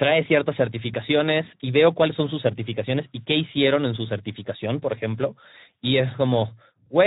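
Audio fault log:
throughout Speex codec. The speech sounds noisy and hoarse for the whole clip, and the damage is plainly audible. Speex is a CELP codec that models the vocal tract and spends its limited bits on the excitation signal. Here the excitation is coarsely coded, so its fine detail is replaced by rough, buzzy energy. The amount of roughness fits a low-to-middle setting of about 11 kbps.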